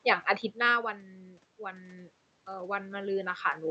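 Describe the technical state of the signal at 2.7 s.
At 2.7 s the signal is in the middle of an automatic gain rising phase that runs from 0.75 s to 3.5 s. After the talker moved away from the microphone around half a second in, the input level fell by about 18 dB, and the gain control is slowly compensating, adding about 9 dB over that span. The voice and the room noise swell together, so the background grows as the speech level recovers.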